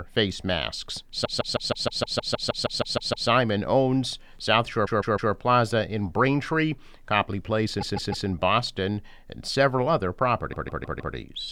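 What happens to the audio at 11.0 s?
At 11.0 s the audio is inside a repeated-frames stutter running from 10.52 to 11.14 s. A 156.7 ms block, consistent with six compressed frames, plays four extra times, adding about 0.63 s. A spectrogram shows an identical pattern tiled edge to edge.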